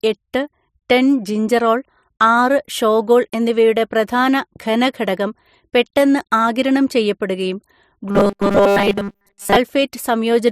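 Right after "ഘനഘടകം പെട്ടെന്ന് ആഗിരണം ചെയ്യപ്പെടുകയും", from 8.09 to 9.57 s, there's robotic sound from repeated short buffers: a metallic 200 Hz buzz, likely from a 5 ms chunk being looped over most of the stretch.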